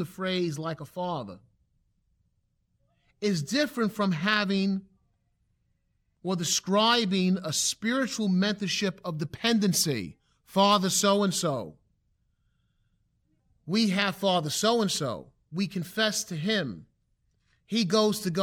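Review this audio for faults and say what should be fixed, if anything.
Nothing to fix: no faults heard anywhere in the speech.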